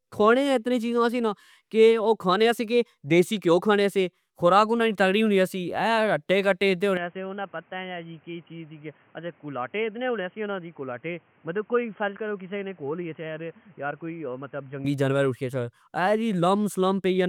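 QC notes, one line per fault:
6.97–14.85 s, input switched to a poorer device: right after "اہہ اتے کٹے" the speech turns dull and boxy with nothing above 3.2 kHz, drops about 10 dB and gains a new noise floor about 30 dB down, with no gap at the switch, likely a narrower-band microphone taking over.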